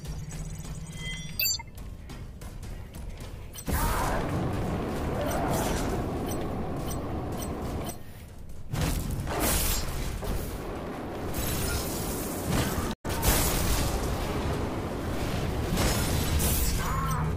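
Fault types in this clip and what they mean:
Repeated buffer, 4.54 to 4.56 s: playback data arrived late, so the device replayed its last block of audio twice more, each repeat butting hard against the last. The three 10 ms copies, which fit a 10 ms buffer, make a brief buzzy click, with essentially no audio lost.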